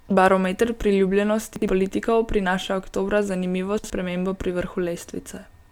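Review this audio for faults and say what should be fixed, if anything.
Chunks out of order twice: 1.56 to 1.68 s, just before "politikov prinaša oktobra zanimivo", and 3.78 to 3.9 s, just after it. Each time a 60 ms chunk of speech plays one chunk late, swapping places with its neighbour. No audio is missing. The sequence is wrong, so the moment sounds jumbled. Each swap leaves three hard joins. To prevent it, reorder chunks by sequence number or timestamp before playback or writing.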